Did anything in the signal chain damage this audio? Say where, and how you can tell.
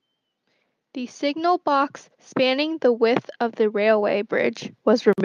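Yes: from 1.19 s to the end, speech and background swell together, the automatic gain rising as call processing lifts its gain to compensate for quiet input.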